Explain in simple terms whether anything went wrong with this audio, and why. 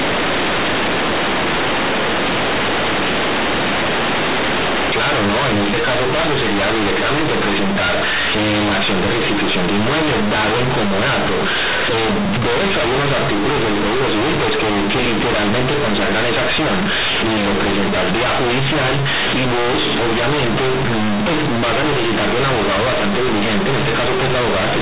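Something went wrong at playback: the sound was stored as A-law telephone audio, but it was played back as plain 8-bit samples without being decoded first. This is companded audio read as linear. Because the decoding step was skipped, each change of sign in the signal jumps across half the output range, so quiet and loud parts come out equally huge. From start to finish, the speech sounds harsh, buzzy and very loud, with heavy noise filling the pauses.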